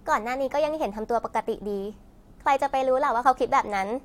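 Speech recording with nothing technically wrong with it, so there are no times or causes to give.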